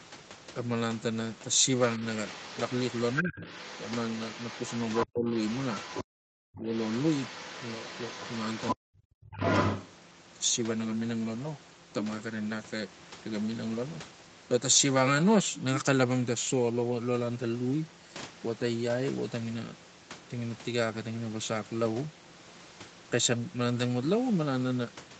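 From 1.78 to 6.04 s, the other side's voice leaks through at about 15 dB below the speech. The likely cause is a loudspeaker echo the echo canceller failed to remove. It returns from 6.55 to 8.75 s, then from 9.32 to 9.9 s at about the same level as the speech. Speech is suppressed in double talk at 3.22 to 3.47 s, with a drop of about 15 dB. It happens again at 5.05 to 5.3 s, 6.04 to 6.69 s and 8.75 to 9.37 s, where it falls by about 40 dB. The canceller likely treated both voices as echo and pulled them down together.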